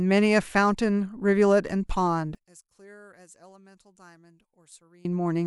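From 2.35 s to 5.05 s the speech drops by about 27 dB when heard in mono, leaving only a faint residue of the voice before full level returns. The likely cause is one channel inverted: with one stereo side in reversed polarity, the centred voice present in both channels cancels on summing. What survives is the small difference between the two sides, which sounds weak.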